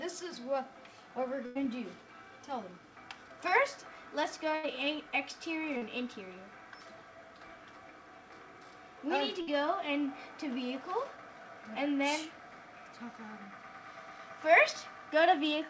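The audio passed through a call link whose content stops at 8 kHz, which fits a G.722 codec at 64 kbps. Three bursts of packet loss occur at 1.46–1.57 s, 4.55–4.65 s and 9.41–9.49 s. In each, the receiver held the last sound and faded it over 92, 80 and 57 ms, then resumed with 100, 80 and 60 ms of audio skipped. At 5.77–5.83 s a short concealed packet loss differs from those bursts: only about 40 ms went missing, covered by a 42 ms fill that blends straight back in. It is heard as a brief smear rather than a sustained held tone followed by a jump.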